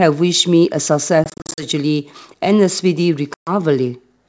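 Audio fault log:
1.24–1.65 s: packet loss on an ADPCM call. About 200 ms dropped as scattered silent gaps up to 40 ms over 340 ms. Each return comes back slightly distorted while the decoder's predictor re-syncs.
3.34–3.51 s: packet loss on an ADPCM call. 130 ms of roughly fifteen packets replaced by silence. Audio resumes with slight distortion until the step size settles.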